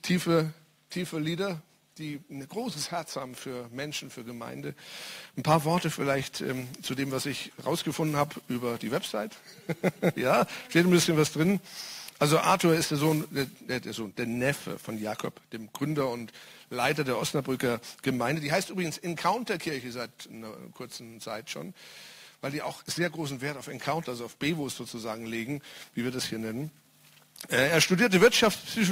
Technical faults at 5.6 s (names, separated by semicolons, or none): crude rate conversion